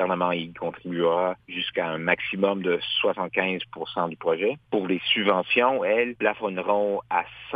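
Nothing here stands out as a technical problem; the audio just runs along without any glitch, dropout or odd artefact catching the ear.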